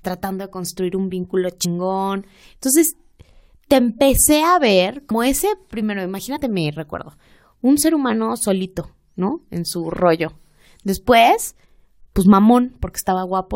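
Whole compressed frames were skipped, missing from the stream or rejected by the decoder as damaged, so playback jumps forward by multiples of the 23.2 ms frame. At 1.64 s, after "de construir un vínculo", about three frames (roughly 70 ms) vanish. At 5.10 s, between "te empecé a ver" and "ese primero", around 100 ms goes. At 6.35–6.37 s, before "mi recuerdo un ser", a single frame drops.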